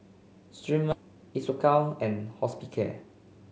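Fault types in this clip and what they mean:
skip ahead: At 0.92 to 0.94 s playback jumps forward with no fill, dropping around 0.4 s of queued speech and joining both sides almost directly.
jitter buffer speed-up: From 1.01 to 2.12 s the receiver trims short pitch-period pieces, playing speech at 108% speed, same pitch, removing about a tenth of a second.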